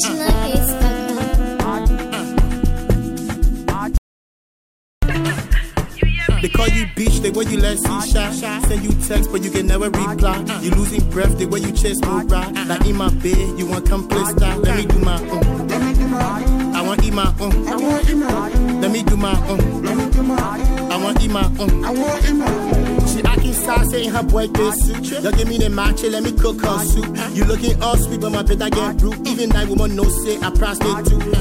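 An audio dropout to silence runs from 3.98 s to 5.03 s, taking out about 1.05 s of the recording. The sound stops abruptly mid-flow and then resumes just as suddenly, and the gap between is silent, with no room tone or background noise at all. That points to the input signal being lost, likely a disconnected device, failed link or brief mute, while recording carried on writing silence. Whatever occurred during that second is gone.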